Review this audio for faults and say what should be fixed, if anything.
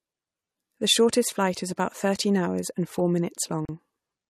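There's a gap at a join of encoded pieces at 3.65 to 3.69 s, right after "thirteen hours and four": a gap of about 37 ms with smeared edges, then the speech picks up where it stopped. Separately encoded chunks were glued together with the encoder delay and end padding left in. Trim that delay and padding before joining, or encode the whole thing in one pass.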